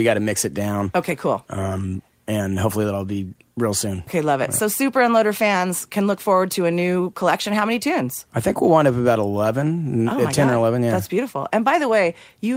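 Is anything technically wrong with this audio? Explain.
No, nothing is technically wrong.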